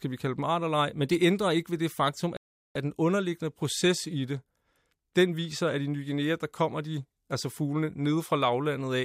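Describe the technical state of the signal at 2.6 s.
A rebuffering stall covers 2.37 to 2.76 s: the player exhausted its downloaded audio after "ikke ved det faktum" and went silent for about 0.39 s until more data arrived, then resumed exactly where it stopped with "den underliggende proces i", adding time without losing any speech.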